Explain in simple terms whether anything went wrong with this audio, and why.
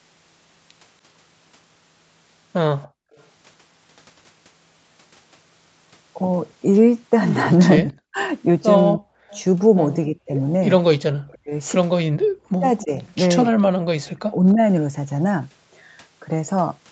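A faint echo leak comes back at 2.82 to 3.23 s and again at 9.3 to 9.41 s. It trails the original by about 0.3 s, likely from a loudspeaker echo the canceller missed.

The background is gated by the echo canceller from 2.88 to 3.16 s. The room sound drops out almost completely for about a third of a second, then returns.

Speech is suppressed in double talk at 7.85 to 9.1 s, 10.07 to 10.33 s and 11.31 to 14.59 s. The voice dips or briefly cuts out, likely because both sides spoke at once. The dip is mild near 10.1 s and deep in the other two stretches.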